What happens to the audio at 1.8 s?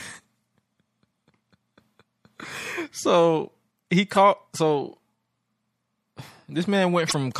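At 1.8 s, as throughout the speech, MP3 compression damage is plainly audible, likely from a low bitrate near 64 kbps: a swirly, watery sound with smeared consonants, and a hard treble ceiling and flickering gaps on a spectrogram.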